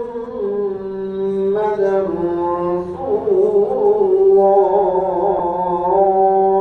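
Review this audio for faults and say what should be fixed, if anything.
At 5.39 s one lost LE Audio frame, about 7.5 ms, leaves a brief noisy smear. The LC3 decoder conceals it by replaying the previous spectrum with random signs. Unlike a dropout, there is no silent gap or click, just a grainy blur. Improving Bluetooth link margin or adding retransmission would prevent it.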